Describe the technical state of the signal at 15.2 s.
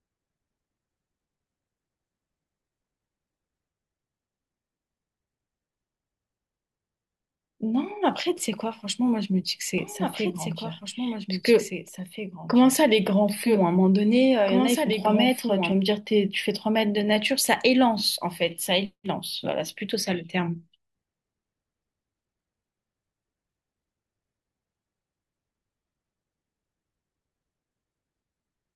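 At 15.2 s you're inside a doubled audio track, running 9.78 to 15.72 s: a dry copy of the speech trails by around two seconds, about 5 dB down, likely from a second, slower capture path.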